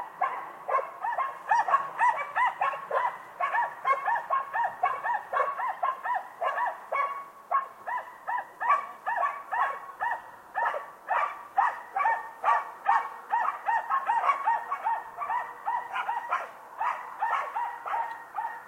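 A recording of everyday sounds with compressed frames skipped at 2.09 s and 8.40 s, where the audio jumps ahead about one and then roughly two 42.7 ms frames. Unlike a dropout, no silent gap appears; the audio simply jumps ahead at each join.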